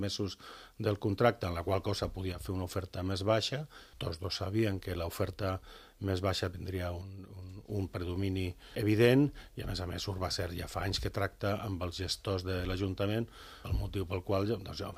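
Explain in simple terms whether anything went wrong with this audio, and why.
One channel drops out at 2.32 to 2.41 s and 7.01 to 7.69 s: the sound abruptly gets quieter, most likely because one stereo side briefly went silent.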